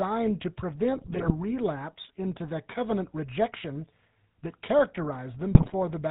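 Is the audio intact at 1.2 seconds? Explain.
No. At 1.2 s the sound breaks into squawks, pops and gargling bursts. These are GSM bit errors, running from 0.96 to 1.31 s and ending just before "relapse into the covenant". On a weak radio link, flipped bits reached the decoder and corrupted the filter, pitch and gain values it rebuilds each frame from. The spectrum warps and the level jumps frame by frame. The damage over that third of a second points to a heavy error rate of several percent, hitting most of the roughly 20 ms frames in the span.

Under those bursts, and across the whole clip, is the plainly audible GSM full-rate codec. Its gravelly, buzzy roughness and missing top end come from coding at 13 kbps. The codec models the vocal tract and drives it with a sparse, regularly spaced pulse excitation that keeps only every third sample, and nothing above 4 kHz survives.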